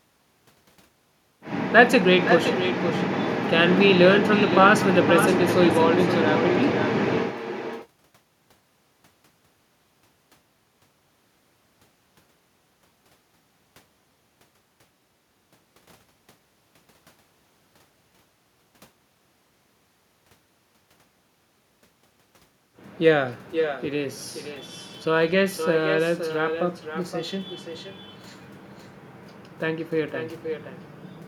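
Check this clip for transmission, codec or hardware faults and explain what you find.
One fault runs through the whole clip: echo with no canceller. The far end's loudspeaker feeds its microphone, and nothing removes it. Each phrase returns about half a second later, thinner, about 8 dB down.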